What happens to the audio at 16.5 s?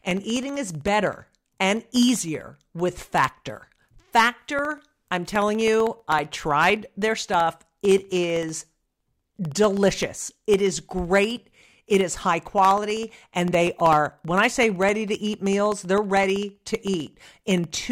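At 16.5 s the speech carries a steady ticking, a click every 64 ms (about 16 per second), audible only while there is signal. These are periodic USB or driver dropouts, present from 0.11 s to 17.83 s. Something repeatedly stalls the USB bus or audio driver at a fixed interval, and each stall drops roughly half a millisecond of audio, replaced by silence. That tiny gap in the waveform is what produces each tick.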